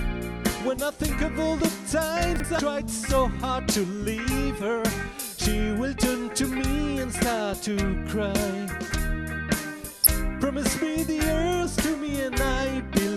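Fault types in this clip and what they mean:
Chunks out of order: A brief jumbled stutter between 2.36 and 2.44 s, where the sound seems to step backward and then forward again. A 40 ms block of audio arrived one block late and was played after the block that should have followed it. Nothing is missing, but the two pieces are swapped, which leaves abrupt joins at the boundaries. These hard edges cause the scrambled moment.
Damaged data in a compressed stream: Two short glitches, each about 33 ms long, from 2.56 to 2.60 s and from 10.04 to 10.07 s. Each one is a point where the encoded data is corrupted. The decoder either misreads those bytes or cannot use them, so it loses its place in the stream and has to find the next valid frame before clean audio resumes. That brief stretch of garbage output is the glitch.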